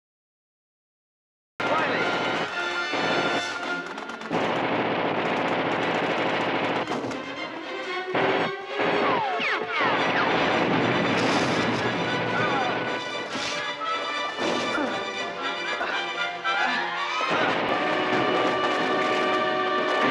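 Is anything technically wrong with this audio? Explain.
Yes. The clip has a cut-off start. From 0 to about 1.6 s there is digital silence, and at 1.6 s the audio begins mid-sound, with no natural attack or fade-in. This happens when capture or streaming starts late: the recorder misses the opening, so the first samples land partway through an ongoing sound. The result is an abrupt, truncated entry in which the sound is already under way when it becomes audible.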